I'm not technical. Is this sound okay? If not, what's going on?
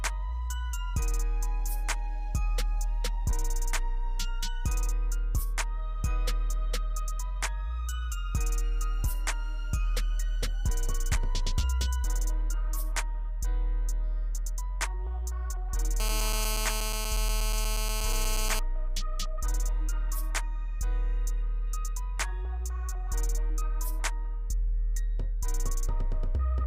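No. GSM phone buzz from 16.0 to 18.59 s: a nearby mobile phone on a call leaks in as a steady, raspy rattle, harsher than smooth mains hum.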